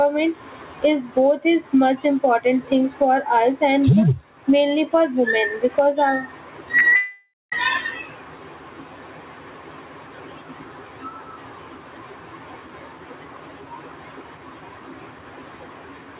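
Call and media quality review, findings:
Gain pumping, throughout. Level swing around 15 dB. Dynamics squashed. Likely cause: input gain set far too high, with a fast limiter clamping down on each peak.

Short concealed packet loss, 6.78–6.84 s, just after "because uh", and again 6.88–6.94 s. Each is a brief smear or wobble. About 40 ms of audio is missing each time. The receiver extended the preceding sound to cover the gap, then crossfaded back into real audio.

Long network dropout, 6.96–7.54 s. The sound carries on as a fading buzz or hiss, then ends in roughly 0.2 s of silence before audio returns. About 0.56 s is lost outright. The likely cause is a network outage, with concealment running out of material. Throughout the clip, the narrowband sound of the call path is audible, with nothing above 4 kHz.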